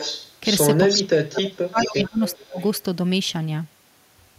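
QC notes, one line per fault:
0.00–0.32 s, 0.88–1.03 s, 1.39–1.49 s, 1.77–1.87 s, 2.26–2.67 s: echo leak. A delayed copy of the speech returns about 0.42 s later, roughly 5 to 20 dB below it. This is likely loudspeaker pickup that the far end's echo canceller failed to remove.
0.91–2.21 s, 2.40–2.59 s: speech suppressed in double talk. The speech dips and drops out in pieces, by up to about 30 dB, for roughly a second in the first stretch. This is likely the echo canceller turning down both talkers while they overlapped.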